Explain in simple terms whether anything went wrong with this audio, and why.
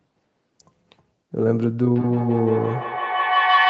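A loud, steady whistle takes over from about 1.9 seconds and keeps going to the very end, pulsing several times a second around a tone near 1 kHz and growing louder than the speech. This is a feedback howl. Two devices in the same room were on the call, so each loudspeaker's sound went back into a microphone. Every trip around that loop made the sound louder, until it became a single ringing tone.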